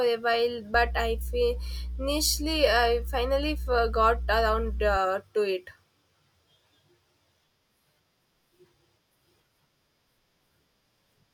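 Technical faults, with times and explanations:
0.74–4.97 s, mains hum: just after "a while", a steady low drone at 60 Hz enters beneath the speech, joined by a few low harmonics above it, and it sits only a few decibels below the speech itself, so it is loud and hard to ignore. It stops before "to it". The cause is power-line energy leaking into the signal path, through a ground loop or from a nearby transformer, at the 60 Hz mains frequency.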